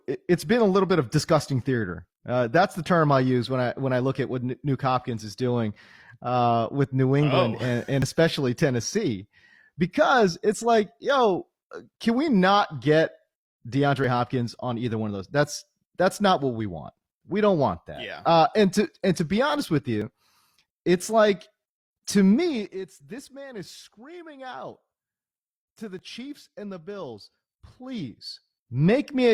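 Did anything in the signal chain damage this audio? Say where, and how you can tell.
Yes. Small skips land at 8.02, 14.04, 20.02 and 25.99 s, each losing roughly 30 to 40 ms. The six-second spacing shows an overlap between stream segments: at each boundary the player trimmed audio that was never actually duplicated.

A fine ticking, like zipper noise, rides on the speech from 27.47 to 28.86 s while the level moves by about 15 dB. The gain stage moved in unsmoothed steps, around forty a second, and each jump left a small click.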